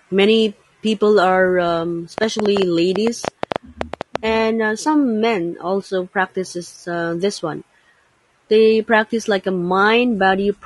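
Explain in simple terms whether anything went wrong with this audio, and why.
The speech sounds rough and grainy throughout, with a hiss between the tones and a dull, artificial-sounding top end. That is low-delay AAC compression, likely the AAC-ELD codec used for video calls, built to work in very short chunks and squeezed hard so it loses fine detail.

From 2.18 to 4.17 s, just after "many people are um" and ending before "and uh some men," there is a train of clicks: about fifteen sharp ticks, roughly eight per second at an uneven pace, loud over the speech. Interference or a faulty connection is the likely cause.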